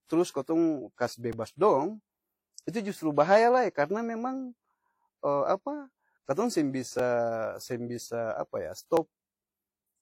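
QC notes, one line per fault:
throughout: transcoding between lossy codecs. Two kinds of coding smear and a dull top end are heard together, likely from a WMA-style encode re-encoded as low-rate HE-AAC.
1.33 s (just after "trus kotong kas"), 6.99 s, 8.97 s: repeated buffer. Brief clicks or buzzes as a tiny slice, about 2.67 ms, fitting a 128-sample buffer, replays one to three extra times.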